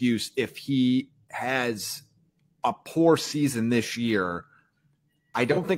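At 3.20 to 3.33 s, between "a poor" and "this year", and at 5.51 to 5.58 s, AAC frame loss with concealment smears the speech into a brief noisy, phasey patch. Each gap of about 43 ms fits one lost frame, filled from the last good spectrum.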